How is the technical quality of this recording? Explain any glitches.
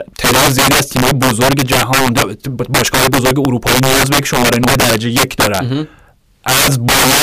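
Not great: the speech is hit by integer overflow throughout. Driven about 16 dB too hot, the loudest peaks, roughly a fifteenth of samples, wrap to the opposite sign, giving harsh cracks far sharper than clipping.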